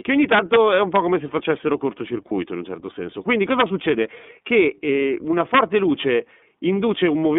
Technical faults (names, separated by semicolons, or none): iLBC codec; integer overflow; lost iLBC frames